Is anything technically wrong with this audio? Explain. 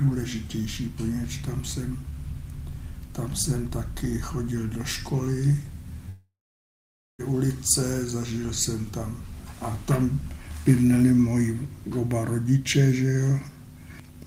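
Yes. From 6.09 to 7.21 s the sound breaks off in what is likely a long network dropout. About 1.1 s of audio never arrives. The receiver stretches the last sound into a brief fading buzz. After that, roughly 0.9 s of silence remains. The audio then resumes further on. The lost section is simply skipped, so the sound jumps ahead rather than picking up where it stopped.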